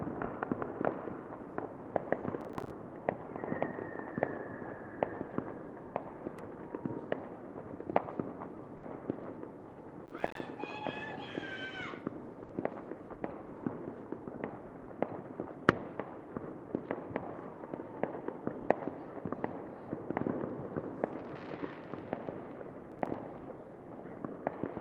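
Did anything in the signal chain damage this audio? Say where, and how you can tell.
Yes. Processor overload crackle at 2.41–2.70 s, 10.06–10.40 s and 22.92–23.14 s comes from the driver or buffer stage. Short slices of silence with hard edges keep breaking the sound, which fits missed deadlines on buffers of around 5 ms, heard as gritty crackle.

A burst of packet loss at 8.77–8.86 s and again at 12.43–12.52 s comes from the network stage. Each time, the receiver stretches the last sound into a 60 ms fill that fades away. The audio then resumes with 60 ms of material skipped.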